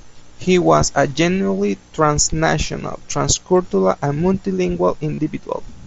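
At 5.15 s, lasting about 30 ms, there is concealed Bluetooth headset packet loss. Voice packets from the headset to the phone failed to arrive, and the receiver filled the gap by repeating the best-matching stretch of the preceding waveform. Because this is a run rather than a single loss, which fits several consecutive packets, it comes through as a short buzzy, held tone at full level, with a slight warble as genuine audio resumes over the mSBC wideband link.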